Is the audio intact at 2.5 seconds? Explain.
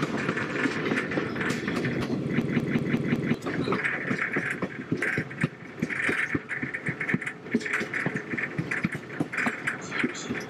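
No. From 2.42 to 3.34 s a 186 ms fragment repeats five times at about 5.4 Hz, a machine-gun stutter. This is a system hang loop: the system froze while the sound hardware kept replaying one buffer, consistent with 8192 samples, losing roughly a second of audio.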